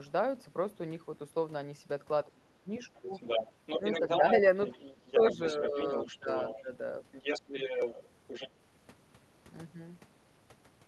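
From 2.24 to 3.12 s the speech is suppressed in double talk. The level falls sharply, by about 25 dB at its deepest, for around half a second in total. Two brief dips follow, near 3.8 s and 4.0 s, each only a few decibels and under a tenth of a second. The likely cause is an echo canceller that cannot separate the local talker from loudspeaker echo. It turns both down while the two sides overlap.

From 3.12 to 4.41 s the other side's voice leaks through. Here it is roughly as loud as the talker. It returns more quietly from 4.65 to 6.62 s and again from 8.27 to 8.49 s, about 15 dB below the speech. Between 7.12 and 8.08 s it sits only about 5 dB under. This is likely far-end audio from a loudspeaker that the echo canceller did not fully remove from the microphone.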